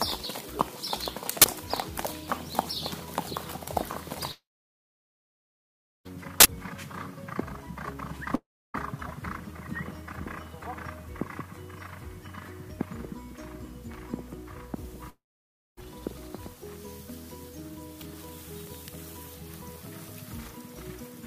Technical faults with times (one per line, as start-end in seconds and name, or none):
1.42-1.44 uninitialised buffer
4.31-6.07 long network dropout
6.40-6.45 uninitialised buffer
8.35-8.76 long network dropout
15.10-15.82 long network dropout